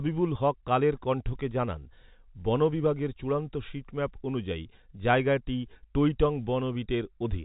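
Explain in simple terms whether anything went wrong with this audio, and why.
Nothing went wrong with this speech; it simply carries the narrow, slightly muffled sound of an ordinary landline telephone call, with nothing above about 3.8 kHz coming through.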